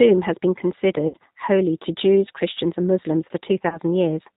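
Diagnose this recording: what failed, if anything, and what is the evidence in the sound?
G.729 codec, throughout (codec stage): the speech is band-limited below 4 kHz and slightly rough and synthetic, which fits 8 kbit/s G.729A rebuilding it from a filter and pulses.

VoIP packet loss concealed by the speech codec, 1.08–1.17 s (between "has been" and "holy to") and 3.69–3.78 s (network stage): the decoder stretched its last pitch and filter into a fading buzzy tone or coloured noise. The gaps were 60 ms and 30 ms, likely two packets and one.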